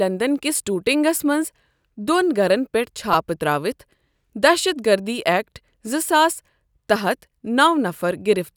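A speech clip with a repeated buffer fault at 3.14 s, just after "گَھرن پیٚٹھ". A 2.9 ms slice of audio plays four extra times, which fits a 128-sample buffer replayed when new data arrived late. Because each repeat is so short, the hard joins come about every 2.9 ms and fuse into a brief buzz near 345 Hz rather than an audible stutter. A dropout would leave a gap, but here essentially no audio is missing.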